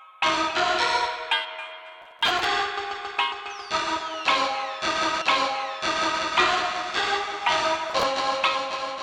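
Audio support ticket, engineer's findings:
Gritty crackle and tearing over the music, 2.02–2.44 s and 7.90–8.03 s. Processor overload crackle: CPU missing runs of short deadlines, fitting buffers of about 10 ms, each skipped.

About one second of music plays again, with a blip at the jump back, 5.20–6.21 s. Stream segment repeated: player fetched or queued the same segment twice.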